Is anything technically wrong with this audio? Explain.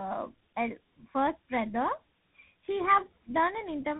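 Yes. Throughout, tandem speech coding: GSM full rate, then CVSD, recode one another's damage, so the speech sounds rougher and more warbly than either codec alone, with nothing above 3.8 kHz.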